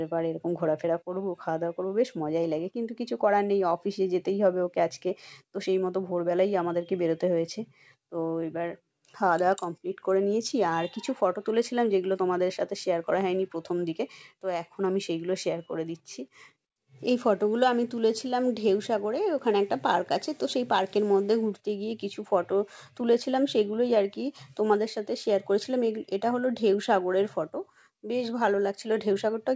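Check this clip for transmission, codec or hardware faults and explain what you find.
No transmission, codec or hardware fault can be heard in this clip. It has clearly passed through a call path, with nothing above 8 kHz, which fits a wideband call codec such as G.722.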